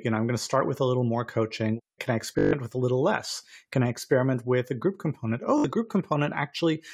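At 2.39 to 2.53 s, Bluetooth stutter: lost packets make the receiver replay a short slice, a buzzing repeat for 142 ms. It recurs at 5.58 to 5.65 s, lasting 61 ms.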